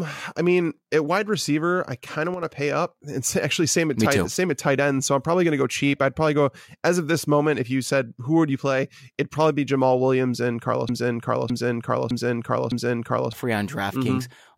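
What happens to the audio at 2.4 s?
The speech abruptly drops in level by about 6 dB from 2.34 to 2.43 s, a brief dip of roughly 80 ms before snapping back. This is likely one channel dropping out: with one stereo side lost, the mono sum keeps only half the shared signal.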